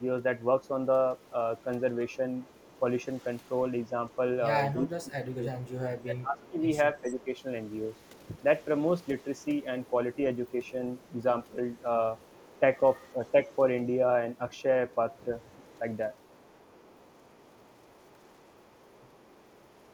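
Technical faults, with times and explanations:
0.63–4.16 s, 5.62–7.42 s, 7.97–8.41 s, 9.02–13.55 s, 14.52 s to the end, echo leak: a faint copy trails the speech by 323 ms, about 30 dB down (about 35 dB in the last stretch). It is likely from a loudspeaker echo canceller letting pickup through. The delayed added copy sets it apart from reverb.
4.78–7.28 s, 13.13–13.34 s, 15.57–15.82 s, speech suppressed in double talk: the talker's own level dips. The drop reaches about 20 dB over roughly 1.5 s in the first span and is only slight and brief later. This is likely an echo canceller ducking overlapping speech, which removes sound rather than adding it.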